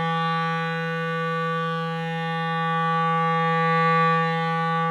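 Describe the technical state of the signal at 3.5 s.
At 3.5 s the music plays through intact, with no audible technical fault at that moment.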